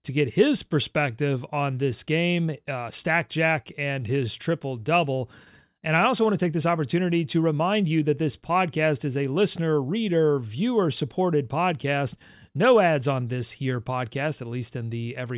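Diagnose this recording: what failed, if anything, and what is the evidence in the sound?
Nothing in the speech signal points to a failure at any stage of the chain, from capture and conversion through transmission, storage and playback.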